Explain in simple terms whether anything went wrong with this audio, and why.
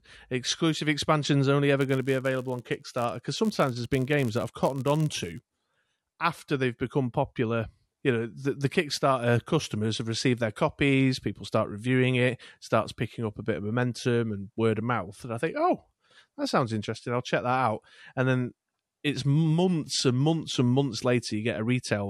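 Filter restarted on every block, from 1.78 to 5.48 s: a processing filter forgot its state each time a new chunk of speech arrived and began from silence, adding a tiny tick to every chunk. Those ticks form a buzz near 86 Hz, which fits 512-sample blocks.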